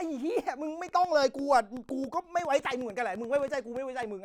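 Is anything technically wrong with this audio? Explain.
Yes. From 0.89 to 4.04 s there is a train of clicks: about twenty similar pulses, unevenly spaced near 7.3 per second, roughly as loud as the speech, likely from electrical interference or a faulty connection.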